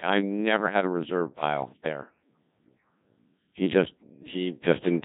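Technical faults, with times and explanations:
Throughout, Codec 2 vocoder: the speech is heavily robotic and buzzy because it is resynthesised from sine waves using only pitch, voicing, energy and a spectral envelope, which fits a rate near 1.6 kbit/s. Unlike waveform codecs' swirling or pre-echo, the original waveform is gone entirely.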